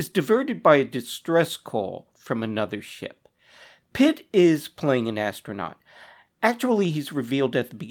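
Clock drift between sender and receiver runs through the whole clip. The sender's clock is slow, by roughly 3 percent. The receiver's buffer keeps running low.

Repeated timing corrections follow from 0.31 s to 7.86 s. The receiver repeats short pieces to fill the gap, adding about a fifth of a second. The speech plays at 97 percent speed, with slight, unevenly spaced hiccups.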